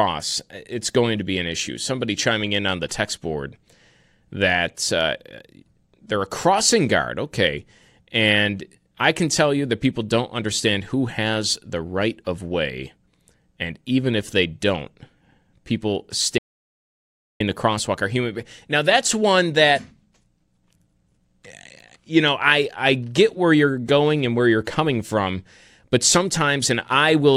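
An audio dropout to silence runs from 16.38 to 17.40 s, removing about 1.02 s of the speech. The signal stops abruptly mid-flow and the gap is silent, with no room tone or background noise underneath, before the speech resumes just as suddenly. That dead-flat gap points to the input being lost while recording carried on writing silence, likely from a brief disconnection, a failed link or an accidental mute.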